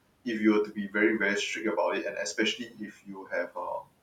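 A speech recording with noise suppressor artifacts throughout. The steady room noise, which sits about 18 dB under the speech, is pushed down by about 21 dB between phrases and comes back up beneath them. That pumping shows the suppressor working against the background. Speech cut by the noise suppressor is a separate fault, because here the speech itself loses level. From 0.66 to 0.95 s, roughly 150 ms of speech sinks by up to about 13 dB. From 2.57 to 3.57 s, around 0.7 s is swallowed by up to about 21 dB. These passages fade with the background instead of breaking off into silence, as a dropout would.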